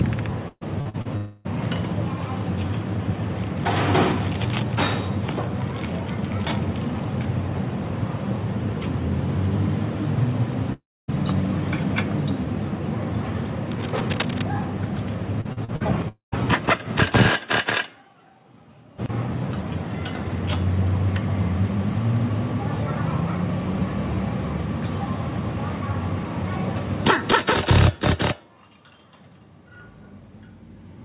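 From 0.48 to 1.08 s, repeated packet loss (robotic sound) breaks the audio into four gaps, the longest 130 ms. Each is patched by stretching the previous sound, so about 42% of the span is concealed. The result is choppy. On a spectrogram it shows as smeared, repeated harmonic blocks.

Right after, from 1.17 to 1.48 s, comes what is likely a long network dropout. The last sound continues as a buzz that never falls silent, which appears as a flat, frozen band.

At 10.73 to 11.11 s a similar, likely dropout fades, then leaves about 0.27 s of flat-line silence in the waveform.

From 13.71 to 14.45 s, what is likely cable scratch noise adds dense, uneven rustling bursts about 10 dB below the signal. These show as ragged broadband specks, capped at 4 kHz like everything else here by the narrowband call codec.

From 15.41 to 15.83 s, four more short losses, the longest 41 ms, conceal about 37% of the span.

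From 16.08 to 16.35 s, a likely dropout fades into about 0.13 s of silence.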